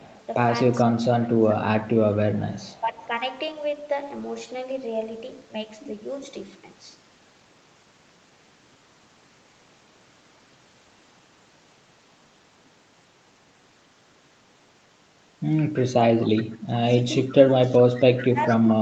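A speech recording with an echo leak and speech suppressed in double talk, both following the same pattern. A faint delayed copy of the talker, trailing by about 0.42 s, runs from 0.01 to 3.07 s at roughly 30 dB below the speech. It returns as a short scrap at 16.28–16.44 s, about 20 dB down, and again from 17.36 to 18.73 s, only about 15 dB down. The likely cause is a far-end loudspeaker whose echo canceller failed to remove the pickup and sent it back. Overlapping those echo stretches, the near talker's level sags from 2.23 to 3.1 s, dipping by around 15 dB for about half a second in total. From 16.46 s to the end it drops more severely, by around 25 dB. This pattern is likely the canceller ducking both signals during double talk because it could not tell the talker from the returning echo. The audio's 8 kHz upper limit comes from the call path.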